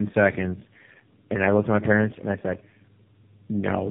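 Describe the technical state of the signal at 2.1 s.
At 2.1 s the speech shows tandem speech coding: repeated decoding and recoding through what sounds like three narrowband speech codecs leaves it rough, muffled and warbly, with a spectrogram cut off above 3.4 kHz.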